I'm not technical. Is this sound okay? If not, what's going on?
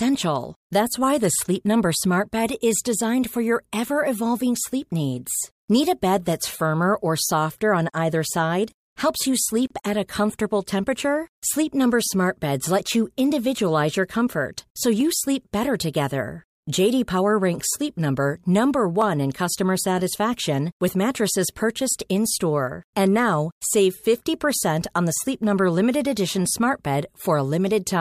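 No. There is a gap at a join of encoded pieces at 9.67 to 9.70 seconds. The speech cuts out for 31 milliseconds, then carries on where it stopped. The audio was saved in separate chunks and joined, and the bit of silence at the chunk edges was left in.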